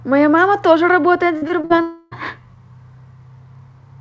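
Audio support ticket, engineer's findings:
Repeated packet loss, robotic sound. 1.38 to 1.79 s. Speech turns choppy. Five short holes, longest 43 ms, patched by stretching the previous audio, so about a third of this stretch is synthetic fill. Component: network leg into the jitter buffer, with concealment repeating the last frame.

Long network dropout, likely cause. 1.81 to 2.13 s. Roughly 0.3 s of speech is absent, replaced throughout by a drawn-out fading continuation with no true silence. Component: receiver concealment extrapolating the last frame until packets resume. Lost content is not recovered. G.722 call path audible as nothing above 8 kHz.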